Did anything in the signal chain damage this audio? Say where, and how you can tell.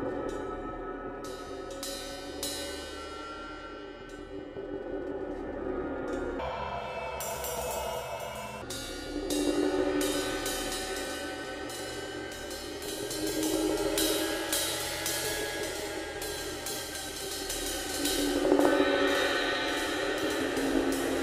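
Yes. From 6.39 to 8.62 s a section at the wrong speed runs 1.89 times too fast, rising close to an octave and hurrying along. Tempo and pitch jump together, unlike a pitch-shifter, which keeps timing. This likely comes from playback or editing on a mismatched clock.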